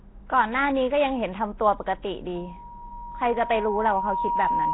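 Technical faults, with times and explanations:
Throughout: Nellymoser compression. A low-rate Flash-era microphone codec is the likely cause, with the heavy damage pointing to a setting around 16 kbps. Each short block is squeezed into a fixed, small number of bits, so weaker bands receive nothing and are replaced with synthetic noise. The speech therefore carries a rough, hissy halo and a smeared, underwater character, and nothing survives above 3.9 kHz, which leaves the whole clip dull and band-limited.
2.35 s to the end: loudspeaker feedback squeal. A microphone is picking up the loudspeaker it feeds, and at 950 Hz the gain around that loop exceeds one, so the tone keeps reinforcing itself on each pass. It builds over roughly two seconds into a steady single-pitch squeal that reaches about the same loudness as the speech. The loop is never broken, so the squeal continues to the end of the clip.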